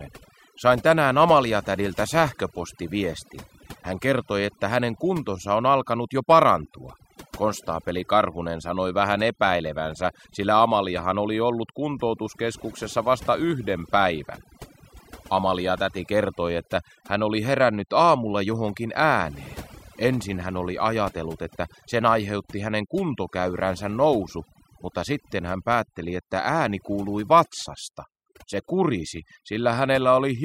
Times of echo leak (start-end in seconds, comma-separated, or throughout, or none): none